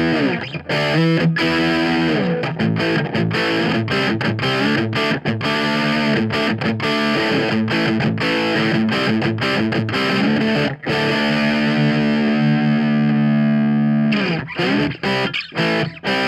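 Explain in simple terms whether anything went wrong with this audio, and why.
Nothing went wrong: no dropouts, glitches or distortion can be heard at any point in the recording.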